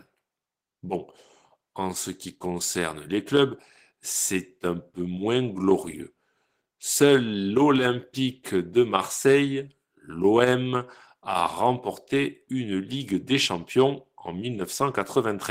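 A recording of speech, with no technical faults to report. Nothing in it calls for a time or a cause.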